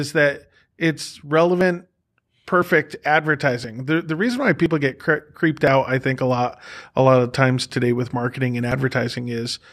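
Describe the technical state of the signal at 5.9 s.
At 5.9 s the speech sits inside a run of periodic USB or driver dropouts, spanning 0.60 to 8.72 s and repeating every 1.01 s. Each time, a short slice of roughly 10 ms is skipped outright, producing a regular tick.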